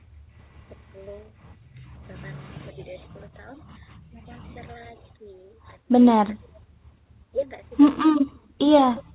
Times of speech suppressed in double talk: 0.66-0.73, 3.86-4.16, 4.97-5.26, 6.04-9.15

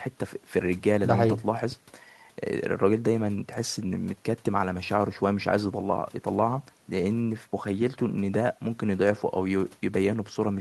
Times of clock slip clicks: none

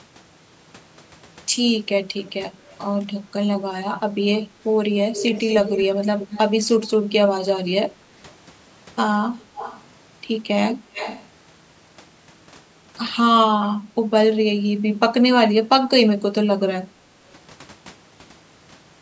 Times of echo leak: 2.25-2.31, 2.67-2.78, 5.14-6.39, 6.82-6.89, 9.56-9.83, 10.93-11.27

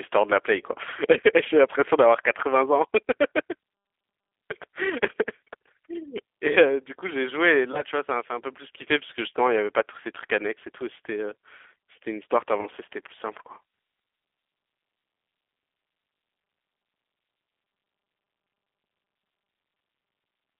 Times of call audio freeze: none

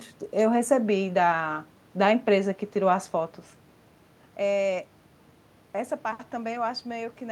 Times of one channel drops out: none

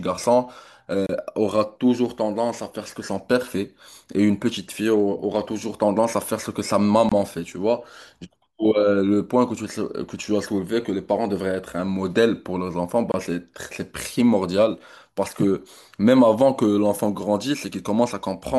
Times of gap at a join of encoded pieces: 1.06-1.09, 7.09-7.12, 13.12-13.14

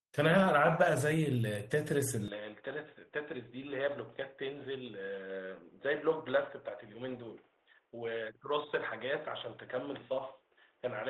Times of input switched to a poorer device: 2.28-11.09

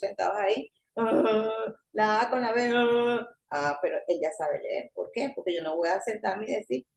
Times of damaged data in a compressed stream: none

